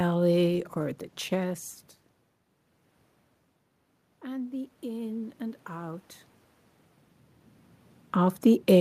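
From 4.22 to 6.1 s there's automatic gain rising: the input dropped by about 16 dB, so the AGC slowly added about 4 dB, swelling voice and room noise together.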